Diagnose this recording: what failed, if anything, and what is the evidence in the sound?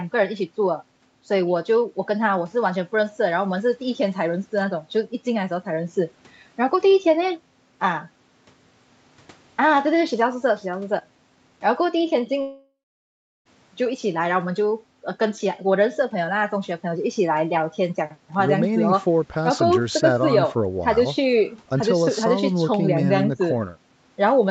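At the network stage, a long network dropout, likely from lost packets, runs from 12.41 s to 13.47 s. Concealment stretches the last sound into a fading buzz for about a third of a second, then 0.71 s of near-silence follows. About 1.04 s of audio is lost.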